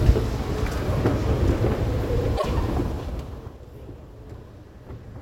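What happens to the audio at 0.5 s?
Nothing goes wrong at 0.5 s; the sound passes through intact there.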